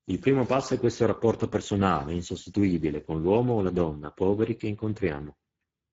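Speex codec damage runs throughout the speech. Too few bits go to the excitation signal, so the speech sounds plainly noisy and hoarse. The sound points to a low bitrate, about 10 kbps. Nothing is heard above 7.6 kHz.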